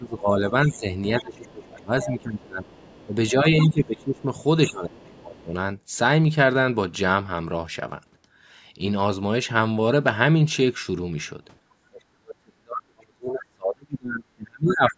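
From the start to 5.56 s the talker's speech dips by up to about 20 dB, for roughly three seconds in total, likely speech suppressed in double talk as the echo canceller turned down both sides at once. Within that stretch a faint second voice, the other side's voice leaking through, appears at 1.19–2.04 s (about 20 dB below the speech), 2.68–3.04 s (about 30 dB below) and 3.59–3.98 s (about 15 dB below), likely loudspeaker echo the canceller failed to remove. From 11.89 s to the end the speech fades again, this time by as much as about 40 dB over roughly three seconds, the same suppression. A brief leak of the far voice at 14.69–14.73 s sits only about 10 dB below the speech.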